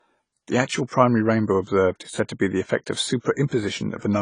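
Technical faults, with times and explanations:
Throughout, low-bitrate audio saved at a high bitrate. Nothing is heard above 10 kHz. A very low-bitrate first encoding likely removed it; re-encoding cannot restore it.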